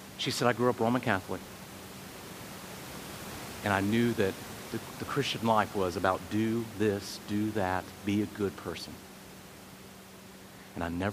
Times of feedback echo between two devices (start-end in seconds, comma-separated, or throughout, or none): none